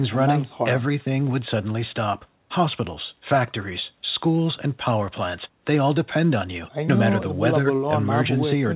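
No faults heard in this speech; the band stops at 4 kHz with the coding grain of a telephone-grade call codec such as G.711, which is the call path working as designed.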